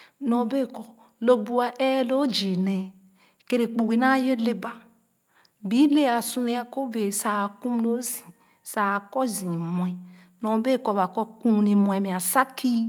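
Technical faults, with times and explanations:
No technical faults detected.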